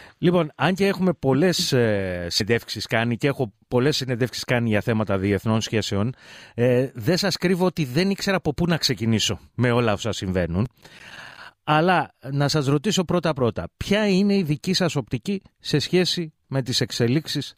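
At 2.39 s and again at 4.27 s, compressed frames are skipped. The sound jumps ahead by a whole number of 26.1 ms frames, roughly five frames or about 150 ms the first time and one frame or about 30 ms the second. Overlapping frames smear each join into a soft blip, which appears as a slight discontinuity in the waveform.

From 10.65 to 11.51 s, processor overload crackle tears through the sound. Around twenty audio buffers, each roughly 5 ms, miss their deadline and are replaced with silence. The waveform shows many hard-edged gaps, and the spectrogram shows scattered broadband vertical streaks.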